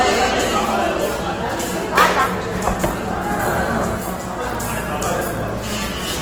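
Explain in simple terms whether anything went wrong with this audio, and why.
The whole clip has a grainy, rough edge that's easy to hear. That's Opus compression, likely squeezed hard enough that the encoder fills in detail with noise.

From 1.51 s to 6.12 s there's a train of clicks: a steady ticking about seven times a second, forty-odd clicks, roughly as loud as the sound itself, likely from electrical interference.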